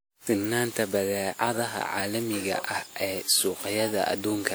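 Speech, swirly, smeared and hollow throughout, with blurred attacks. Generation loss is the likely cause: repeated lossy re-encoding, roughly seven passes, consistent with WMA at 96 kbit/s.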